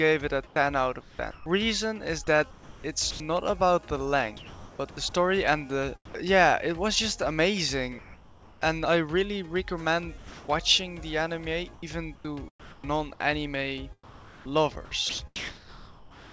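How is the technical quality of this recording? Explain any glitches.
The recording is choppy in two long stretches, with one short patch where the background turns flat and artificial; the band stops at 8 kHz, as expected from a G.722 call path.

Sound chopped by the voice detector, 0.47 to 6.35 s and 10.18 to 16.31 s: quiet portions and edges drop out, with about 1.44 s and 2.3 s filled. The likely cause is the sender's voice detector repeatedly gating transmission, with comfort noise filling each gap.

Comfort noise in place of the background, 7.98 to 8.61 s: the background, already about 24 dB below the loud parts, becomes a steady, featureless hiss about 3 dB quieter for 0.63 s. This is likely discontinuous transmission, with the receiver synthesising rough background-shaped noise while nothing was sent.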